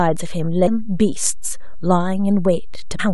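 A constant DC offset runs through the whole speech recording, shifting the waveform off zero for its full length. You can't hear the shift as a sound. It eats into headroom on one side of the waveform and leaves a steady component sitting at zero frequency.

Damaged data in the compressed stream makes the decoder misread the affected frames and lose sync while it searches for the next valid header. This happens at 0.66 s and again from 2.98 to 3.01 s. Each spot comes out as a brief chirp or blip breaking into the speech.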